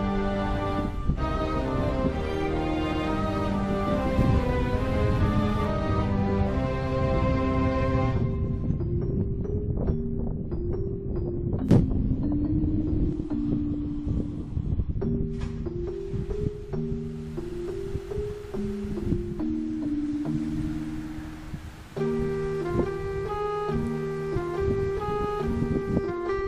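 At 2.90 s the sound stutters. A block of about 0.14 s plays, then plays again at once. This is repeated frames. A run of compressed frames was delivered twice, which fits three frames. At 17.49 s it happens again, with a shorter block of about 0.09 s, which fits two frames. Each repeat makes the audio longer by that block's length.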